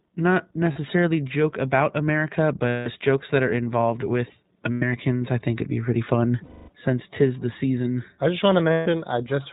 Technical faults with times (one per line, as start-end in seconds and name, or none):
0.00-9.53 iLBC codec
0.72-0.78 lost iLBC frames
2.67-2.87 lost iLBC frames
4.72-4.83 lost iLBC frames
6.44-6.70 lost iLBC frames
8.72-8.88 lost iLBC frames